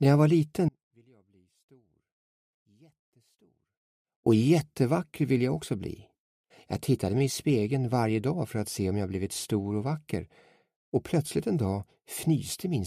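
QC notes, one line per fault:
0.69–4.26 s, audio dropout to a faint residue: for about 3.6 s the sound cuts abruptly to a faint leak roughly 35 dB below normal level, then returns just as suddenly. The likely cause is signal loss upstream while the downstream path stayed live. The hard edges distinguish it from a pause or fade.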